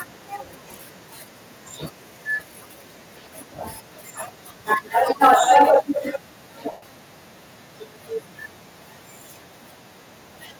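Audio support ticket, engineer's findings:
Harsh crackle on the loudest syllables, 5.23–5.77 s. Waveform: peaks flattened at the converter's limit, driven about 5 dB past the limit, a few percent of samples affected. Spectrogram: broadband splatter above the harmonics. Likely microphone overload: input gain too hot, converter clipping the peak tops.

Sudden level drop of about 2 dB at 5.27 s, voice and background falling together. Waveform: the envelope steps down once, right inside the distorted passage. Likely microphone volume stepped down by the call software reacting to the clipping, cutting device input gain in a single step.

Tonal content smears into noise, then fades, 6.72–6.83 s, about 105 ms. Spectrogram: harmonic lines replaced by a diffuse noisy band dimming toward silence. Lost LE Audio frames: the LC3 decoder reuses the last spectrum with randomised signs and fades it. The gap length fits a run of 7.5 ms frames.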